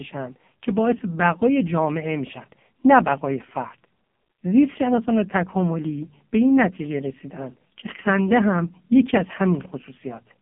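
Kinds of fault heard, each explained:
AMR narrowband mobile codec: The speech has passed through a narrowband mobile speech coder that rebuilds the voice from a vocal-tract model and a few pulses per frame, and the heavy damage, a buzzy and synthetic quality, points to one of its lowest modes, around 5 kbps. On a spectrogram the energy stops at a hard ceiling near 3.5 kHz, with the usable band roughly 200 Hz to 3.4 kHz, and the harmonics look smeared rather than crisp.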